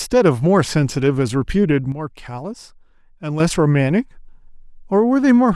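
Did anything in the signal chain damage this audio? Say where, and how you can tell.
Yes. A sudden gain jump hits the speech from 1.92 s to 3.4 s, where the level drops by about 8 dB in a single sample and springs back just as abruptly. Speech and background noise fall together, so this is a gain step, not a quieter talker. On the waveform the envelope shows a clean rectangular notch, and the spectrogram dims uniformly across all frequencies with sharp vertical edges. The likely cause is a digital gain setting applied without a ramp, somewhere in the driver or processing stage.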